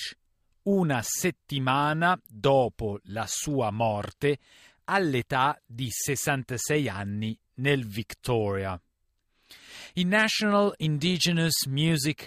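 Faint regular ticks, roughly five a second, run from 0.28 to 12.15 s: clock slip clicks, likely from two free-running clocks about 100 ppm apart.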